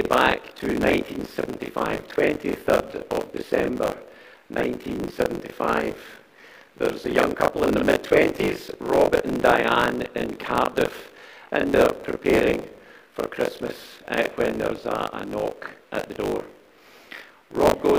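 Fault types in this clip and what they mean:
Buffer tearing: the software filling the ring buffer and the hardware draining it have drifted out of step, so their positions cross inside each period. In every period, a little under half of the samples are stale audio from roughly 40 ms earlier, bounded by abrupt joins at both edges. The result is a continuous robotic buzz at 50 Hz, pointing to a 20 ms buffer period, heard throughout the clip whenever signal is present and absent in silence.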